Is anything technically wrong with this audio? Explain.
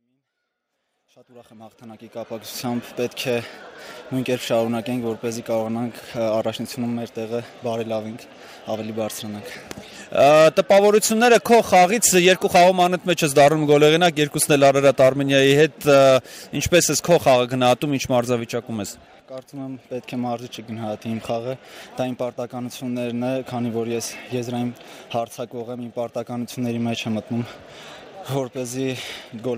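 No, nothing here is technically wrong: the level rises gently from the very beginning until about 2.55 s, as a deliberate edit would, with no hard edge or click, and no fault can be heard anywhere in the signal.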